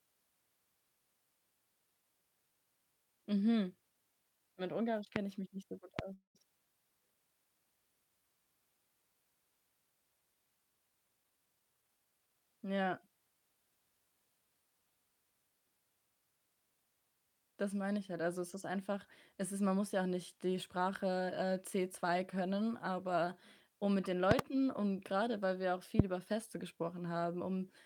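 Loud pops at 5.16 to 5.18 s and again at 5.99 to 6.01 s, just after "mich nicht so gut", each one sharp click about 20 dB above the speech. A sudden electrical pulse, likely from a plug, switch or static discharge, lands on top while the speech continues underneath.

A call audio freeze follows at 6.13 to 6.37 s. Packets were likely held up and the jitter buffer ran dry, so the last sound is stretched into a fading buzz, then about 110 ms of silence. The speech resumes where it stopped, with nothing lost but about 214 ms of added delay.

A jitter buffer speed-up runs from 11.08 to 12.42 s. With too much audio queued, the receiver trims short pitch-period slices repeatedly, roughly 200 ms in total. The speech plays at about 115% speed with unchanged pitch and sounds noticeably hurried.

Loud pops return at 24.31 to 24.41 s, two in quick succession, and at 25.99 to 26.02 s, after "grade weil wir auch". 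Each is about 25 dB above the speech, with the same likely electrical-pulse cause as before.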